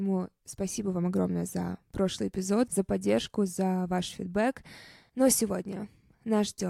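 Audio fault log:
No faults detected anywhere in this speech recording.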